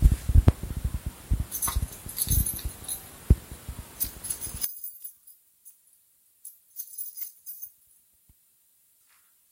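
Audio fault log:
4.65–9.52 s, one channel inverted: the sound suddenly drops about 12 dB, likely because one side flipped polarity so the shared centre cancels.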